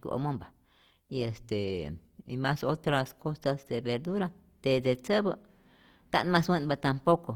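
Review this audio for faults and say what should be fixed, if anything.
Throughout the speech, tones come across grainy, rough and plainly noisy rather than clean. The full bandwidth is kept, with content reaching about 20.2 kHz, so nothing sounds muffled. The roughness is likely Opus compression in its music (CELT) mode. At a rate that sounds like around 24 kbps, the encoder runs short of bits and fills bands with folded or noise-like energy, which trades swirl for grit. Encoding at a higher bitrate would prevent it.

From 1.50 s to 3.46 s, the speech suddenly slows and drops in pitch, by about a semitone (104 cents), then snaps back to normal. Speed falls by 5.8% along with the pitch, which points to a drift correction step. That is likely clock-matching software abruptly changing the playback rate in one jump to rebalance its buffer. Spreading rate corrections gradually over time, instead of stepping them, would prevent it.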